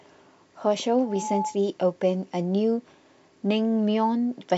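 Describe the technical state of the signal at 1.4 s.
At 1.4 s the signal is caught in a loudspeaker feedback squeal that runs from 1.05 to 1.59 s. A microphone is picking up the loudspeaker it drives, and at 857 Hz the loop gain passes one, so that tone swells over roughly a third of a second to about the level of the speech. A spectrogram shows a bright, steady horizontal line at 857 Hz, and the waveform's envelope grows into a dense, even block.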